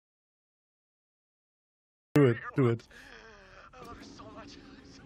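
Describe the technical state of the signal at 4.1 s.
Around 4.1 s the signal is intact, with no audible fault at that point.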